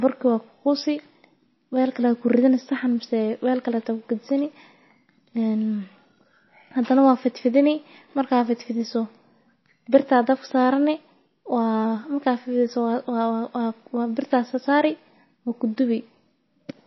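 Across the whole clip the speech sounds watery and swirly, with chirpy, smeared s sounds and nothing above 5.8 kHz, which points to a low bitrate near 24 kbps. The likely cause is MP3 compression. A spectrogram shows a flat ceiling and flickering, patchy upper bands.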